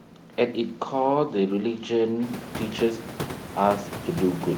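No system faults are present in the speech; the room noise rises by about 21 dB at around 2 s and then sits about 12 dB below the voice, but that is part of the recorded environment.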